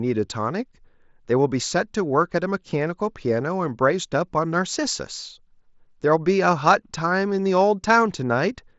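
Nothing here counts as a fault: the speech comes across as you'd expect from a Bluetooth headset link using the mSBC codec, with the band topping out around 8 kHz and just a faint grain on the louder moments.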